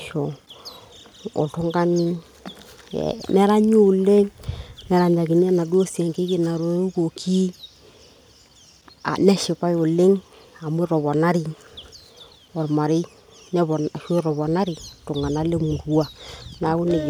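No technical fault can be heard anywhere in the speech. There is no moment in the recording where anything goes wrong.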